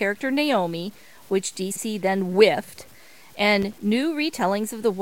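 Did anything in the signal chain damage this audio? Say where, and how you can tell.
Yes, three separate problems, at three different stages.

Sample-format conversion first. A grainy, gritty distortion rides on the speech throughout, sitting around 30 dB below the signal and tracking it, so the roughness thickens on quiet syllables and the softest tails break up or sputter rather than fading smoothly. Because the error moves with the sound instead of sitting as a steady hiss, this is most likely low bit depth without dither, something like truncation down to 8 bits with no noise added first.

Then the codec or network stage. From 1.71 to 1.81 s there's a garbled flutter. That's frames out of order: two neighbouring chunks got swapped and decoded as they came in, so the two halves of that roughly 0.1 s stretch play back in reverse order. It would fit pairs of frames of about 46.4 ms being exchanged. 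Nothing goes missing, and the timing afterwards stays intact.

Last, the analogue wiring. From 3.62 to 3.73 s there's a short, irregular burst of scratchy crackle that doesn't follow the speech at all. That's loose connector crackle: a worn or dirty contact making and breaking rapidly, chopping the signal into fragments for about a tenth of a second. Reseating or cleaning the plugs on that run would be the first thing I'd try.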